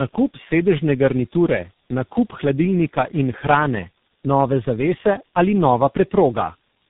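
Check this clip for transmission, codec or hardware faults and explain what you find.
One fault runs through the whole clip: tandem speech coding. The call crossed three speech codecs in a row, each re-encoding the last one's damaged output. The speech therefore sounds rough, muffled and warbly, with nothing above 3.8 kHz.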